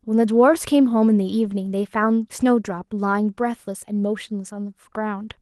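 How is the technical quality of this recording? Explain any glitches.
There are no glitches in this speech recording. The Opus voice compression is working as expected, keeping the full band with only light coding texture, which fits a moderate bitrate of around 20 kbps.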